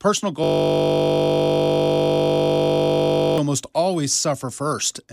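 From 0.44 s to 3.38 s the speech gives way to a steady 50 Hz buzz, ending just before "almost always". This is a system hang loop: the system stalled while the audio hardware kept replaying the same 20 ms buffer, well over a hundred times.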